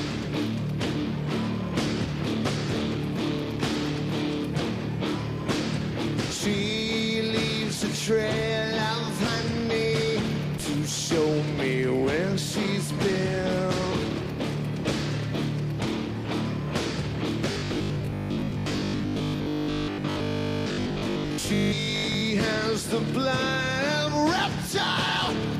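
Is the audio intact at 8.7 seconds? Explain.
Yes, the audio is intact at 8.7 s, with no dropout, click, distortion or other fault at that moment.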